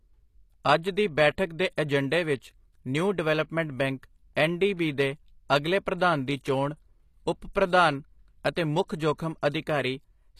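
Throughout, the speech treble sounds gritty and metallic, with no content above 14.9 kHz, likely from HE-AAC compression rebuilding the highs from lower bands, which fits a low bitrate around 24 kbps. At 8.88 s, a brief hiss smears ahead of an attack, a 16 ms pre-echo where block-wide quantisation noise spills into the quiet moment before it.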